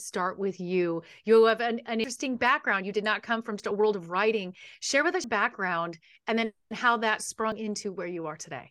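Dropped buffers (overruns) break this speech clip at 2.04 s after "have an an", at 3.6 s between "did not come from" and "a world of writing", at 5.24 s just before "background and then how", and at 7.52 s. Each is an abrupt forward jump with no gap, cutting out roughly a tenth of a second at 2.04 and 5.24 s, around 70 ms at 3.6 s and a few tens of milliseconds at 7.52 s. The likely cause is that the recording software fell behind and the hardware overwrote samples before they were read.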